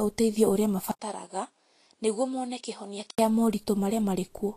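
Vorbis compression runs through the whole speech clip. Nothing sounds above 14.2 kHz, and the treble is quantised so coarsely that fine detail turns to grainy hiss, with roughened tones and softened consonant attacks. The damage fits a low-bitrate encode around 34 kbps.

From 0.91 to 3.19 s, a switch of the input to a poorer device is the likely cause of a duller, boxier sound. An 80 ms silence opens the change. The band then stops at 10.5 kHz, the level drops by about 10 dB, and a faint new background noise sits far below the speech.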